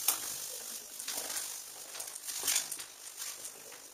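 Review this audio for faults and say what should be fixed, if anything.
Overlap-add ripple runs through the whole clip. The level pulses by about 6 dB at around 50 Hz, a rough flutter. It comes from rebuilding the audio from windowed frames whose overlap does not add up to a constant gain.

To prevent it, pair the analysis and synthesis windows with a hop size that meets the constant-overlap-add condition, or normalise by the summed window envelope.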